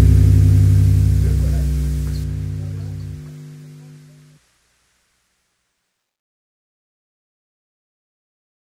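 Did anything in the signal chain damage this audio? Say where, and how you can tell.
Yes. From 2.24 s to 7.14 s the sound turns dull and muffled, pointing to de-emphasis applied wrongly at a filtering stage such as a converter or playback path. A treble cut meant to reverse pre-emphasis was applied where none existed, or applied a second time, leaving a smooth downward tilt of about 8 dB at 10 kHz relative to 1 kHz. On a spectrogram that span shows the upper band dimmed with no sharp edge. The waveform shows no clear change.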